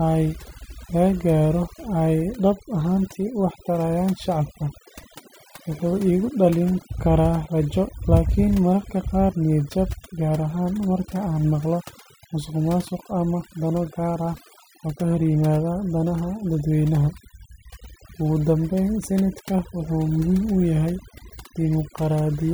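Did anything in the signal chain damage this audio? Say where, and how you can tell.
Yes. Overdone noise removal in the processing stage affects the whole speech clip: gating of bands near the noise estimate leaves near-silent gaps with twinkling specks, and quiet voice detail is stripped. A spectrogram shows flickering isolated bins and black holes between harmonics.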